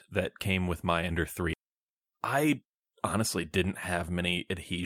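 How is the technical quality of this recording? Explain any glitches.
The recording has one glitch. At 1.53 to 1.55 s, the speech skips ahead. About 0.4 s of audio was dropped, and the two sides join directly with no gap.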